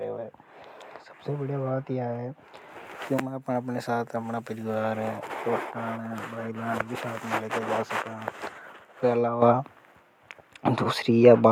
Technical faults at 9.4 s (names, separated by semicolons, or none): microphone volume stepped up